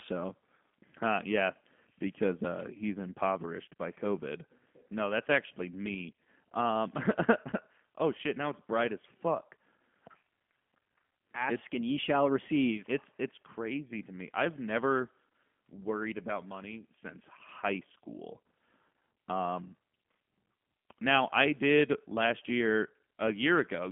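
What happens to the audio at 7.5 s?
At 7.51 s there is VoIP packet loss concealed by the speech codec. About 20 ms of audio went missing, which fits a single lost packet. The decoder filled the gap by repeating its last pitch and filter at falling gain, so the sound is briefly stretched into a buzzy tone or coloured noise that fades until about 7.55 s. On a spectrogram, the stretched sound dims. The waveform shows a short, decaying stretch.

Underneath this, and throughout, is the G.729 codec at 8 kbit/s. It gives the audio a rough, synthetic edge. On a spectrogram, the energy is confined to about 200 Hz to 3.4 kHz.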